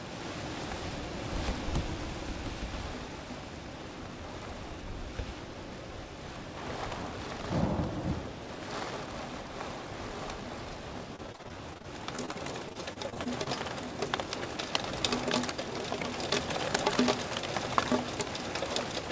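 From 11.16 to 13.48 s there's repeated packet loss (robotic sound): short holes up to 31 ms keep getting papered over with repeated sound, so it turns choppy. Then from 14.28 to 15.62 s a jitter buffer speed-up trims about 70 ms of tiny pitch-period slices, running roughly 6% fast, sounding hurried. All of it sits in the call path's band, with nothing above 8 kHz.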